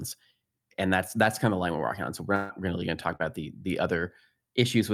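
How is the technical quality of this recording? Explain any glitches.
Two network glitches stand out in the speech.

From 2.35 to 2.51 s there is a burst of packet loss. About 140 ms of audio never arrived. The receiver stretched the last sound across the hole and let it fade. It comes across as a held buzz or hiss, then speech jumps ahead.

From 3.15 to 3.21 s there is a short concealed packet loss. About 40 ms went missing. The decoder invented a stand-in from the preceding sound, then blended back. The result is a brief smear or wobble, and a quick consonant may drop out.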